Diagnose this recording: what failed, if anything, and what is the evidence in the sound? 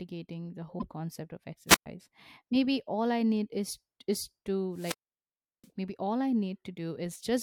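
Wireless microphone squelch dropout in the analogue radio link. After "concept of", 1.68 to 1.86 s, hiss rises and the sound mutes for 118 ms. After "need is is to", 4.73 to 5.69 s, a 718 ms hole precedes "maybe all I". The FM signal faded and the receiver's squelch muted the output.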